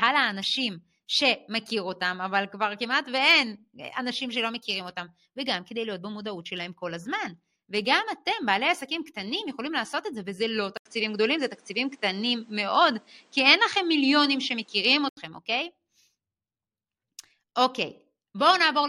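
A speech recording that turns duller and boxy at 10.77 s, after a brief gap of about 80 ms, and stays that way until 15.17 s. Over that span nothing is heard above 9.8 kHz, the level shifts by a few decibels, and a faint new background noise appears well below the voice. The likely cause is the input switched to a poorer device, another microphone or a headset's call profile with a narrower band and its own tone and noise.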